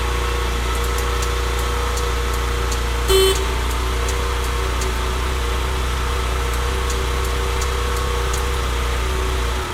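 At 3.09 s the sound jumps abruptly forward, with no gap, as if about a second and a half of audio had vanished. This is a skip ahead: a stretch of audio was dropped while later audio was already queued, so the two sides of the missing section are joined almost directly.

From 3.34 s to the end, the audio runs slightly fast, at about 104 percent speed, with its pitch unchanged. This is a jitter buffer speed-up: the receiver held more audio than it wanted and trimmed short pitch-period-length pieces repeatedly, removing about a third of a second in total.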